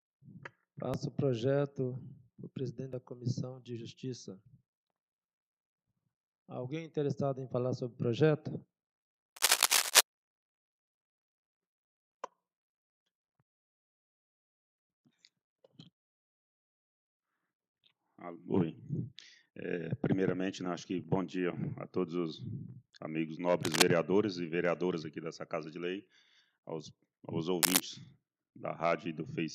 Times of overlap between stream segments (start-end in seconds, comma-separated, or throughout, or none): 0.94, 2.93, 6.93